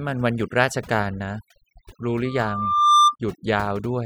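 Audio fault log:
throughout: overdone noise removal. The noise reduction is set so aggressively that frequency bands near the estimated noise floor are pulled down or out. The background drops and breaks up into twinkling specks. Unlike a simple low-pass or gate, the damage flickers band by band.
2.25–3.16 s: loudspeaker feedback squeal. A single tone at 1.2 kHz swells over roughly 0.7 s to around 10 dB above the speech, which is the mark of a microphone picking up its own loudspeaker with loop gain above one at that frequency. It is one sustained pitch that grows by itself, not broadband noise or a click.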